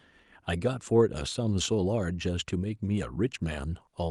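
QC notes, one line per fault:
No faults found in this speech clip. It has passed through a call path whose top end stops near 12 kHz, which fits an Opus codec at around 48 kbps.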